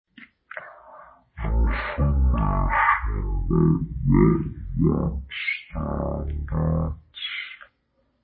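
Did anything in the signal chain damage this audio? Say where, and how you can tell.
Yes. Throughout, the speech is slow and deep, a third of normal speed and 19 semitones down. It's a wrong sample rate at playback, consistent with 48 kHz audio played at 16 kHz.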